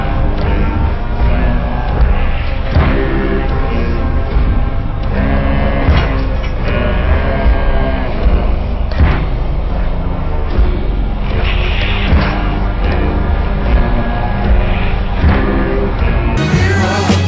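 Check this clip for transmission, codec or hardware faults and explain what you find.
One fault is present. From 0.0 to 16.37 s there is a wrong sample rate. Audio runs at 0.363 times speed, about 17.6 semitones low, which fits 44.1 kHz material played at 16 kHz.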